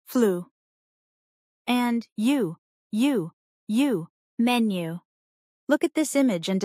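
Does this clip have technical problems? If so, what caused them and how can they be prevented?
No, nothing technical stands out here, so there's no cause to track down and nothing that needs preventing.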